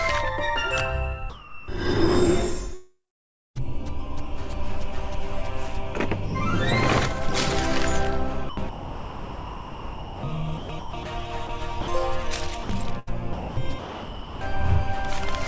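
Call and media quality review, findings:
Sound dropped by the voice detector, 1.30–1.68 s, 11.47–11.49 s, 11.81–11.87 s, 12.63–12.69 s: sound gives way to steady comfort noise, likely sender VAD calling it background.

Long network dropout, 2.74–3.57 s: last sound carried on as a fading fill, then about 0.6 s of near silence, resuming with that stretch missing. Likely lost packets on the network.

Sound chopped by the voice detector, 8.49–10.23 s, 10.57–11.05 s, 12.99–14.41 s: choppy, with holes filled by comfort noise. Likely VAD toggling repeatedly. Over the G.722 path, nothing above 8 kHz throughout.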